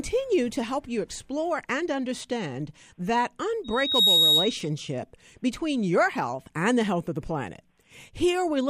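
Speech, hit by loudspeaker feedback squeal from 3.64 s to 4.68 s, just after "explore and understand that". A tone near 3.8 kHz swells over about 0.4 s to roughly 10 dB above the speech. The microphone is re-amplifying its own loudspeaker at that frequency.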